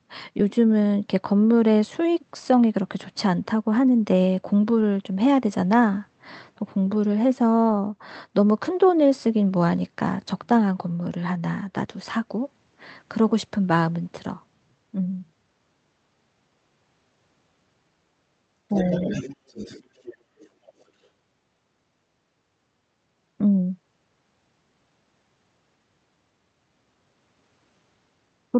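From 18.71 to 20.16 s and again at 20.38 to 20.49 s, the other side's voice leaks through, likely from a loudspeaker echo the canceller missed. On a spectrogram it shows as faint overlapping harmonics, about 15 dB below the talker, then much weaker.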